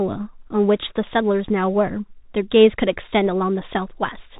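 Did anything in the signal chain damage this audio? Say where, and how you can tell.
Yes, at the codec stage: this speech went through a Bluetooth CVSD headset codec the whole way. Nothing survives above 3.8 kHz, s sounds come out scratchy, and there's a grainy hiss underneath, which fits a 64 kbps one-bit delta stream whose adaptive step can't keep up.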